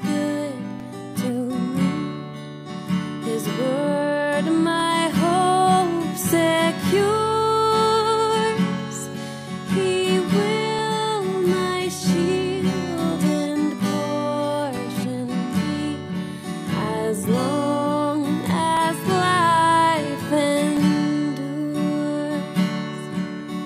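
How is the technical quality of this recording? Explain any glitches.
The recording has one recurring fault: periodic USB or driver dropouts. From 0.80 s to 22.79 s, a short gap occurs every 2.0 s, each losing about a millisecond of audio that is replaced by silence. Something in the system stalls the USB bus or audio driver at a fixed interval, so the stream briefly goes empty. Each gap is heard as a small tick, and the ticks sound only where the audio carries signal.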